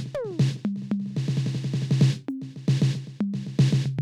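There are no technical faults to describe at any point in this music.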